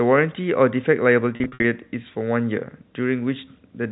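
From 1.36 to 1.64 s there's packet loss with pitch repetition: about 180 ms goes missing in bursts scattered over 280 ms. Each gap is filled by repeating the last pitch period, giving a held, buzzy stutter, and the longest 60 ms run fades briefly toward silence.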